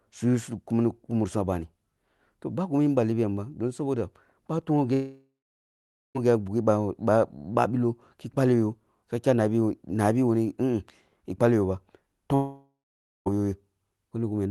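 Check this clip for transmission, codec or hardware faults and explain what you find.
Two long network dropouts are the faults here, heard over a call path whose top end stops near 12 kHz, consistent with Opus at around 32 kbps.

From 4.93 to 6.17 s and again from 12.35 to 13.28 s, a long network dropout, likely from lost packets, leaves 1.2 s and 0.9 s gaps. The receiver extends the last sound as a fading buzz, then about 0.85 s and 0.55 s of near-silence, before audio resumes with that stretch missing.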